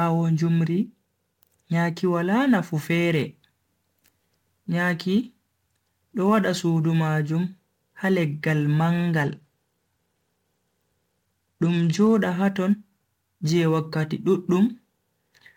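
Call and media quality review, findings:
Sample clock jitter, throughout. Hiss and roughness riding on louder, brighter speech, gone in pauses. Unstable converter clock, timing error of a few microseconds. Noise sits roughly 35 dB under the signal and scales with waveform slope.

Bluetooth SBC bit pool drop, 9.23 to 12.17 s. Treble dulls, gritty noise rises, then clears. Congested link. Sender cut the bit pool, which fits a drop from 28 to 13, near 102 kbps. Top sub-bands starved, remainder coarsely quantised.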